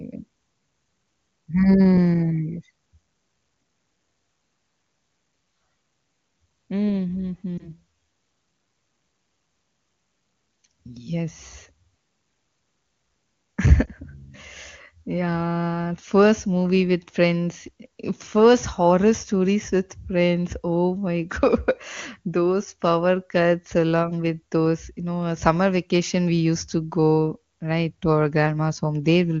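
A speech clip with two brief dropouts from lost AMR speech frames, at 7.58 to 7.68 s and at 13.86 to 13.89 s. Each sounds like a short dip or warble, consistent with a single missing 20 ms frame. The decoder fills the gap by repeating the last good pitch and vocal tract settings at reduced gain. Speech then resumes, briefly weak or rough. The wideband AMR codec's high-rate coding stays clear around the gaps.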